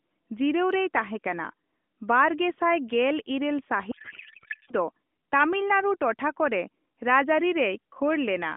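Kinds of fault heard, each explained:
Codec payload misread: from about 3.9 to 4.7 s, just before "ᱫᱚ ᱛᱟᱢᱤᱞᱱᱟᱲᱩ ᱴᱚᱴᱷᱟ ᱠᱚᱨᱮ", the speech turns into garbled warble that barely tracks it. The AMR decoder is pulling fields from the wrong bit positions, which fits octet-aligned frames being unpacked as bandwidth-efficient.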